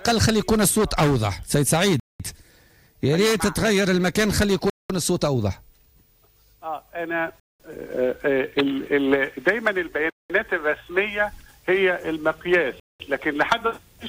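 Gaps between chunks at 2.0, 4.7, 7.4, 10.1 and 12.8 s: the audio arrives in 2.5 s chunks with 200 ms of silence inserted at each join. Nothing is lost, but the sound stops dead every 2.7 s, leaving short holes.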